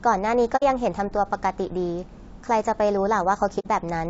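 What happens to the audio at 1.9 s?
At 1.9 s the speech is rough and grainy, with noise filling the gaps between harmonics and a thin, artificial-sounding top band. This runs through the whole clip. It is likely low-delay AAC compression, AAC-ELD at a bitrate near 32 kbps. At this low bitrate its roughly 500 frequency lines a frame are coded too coarsely.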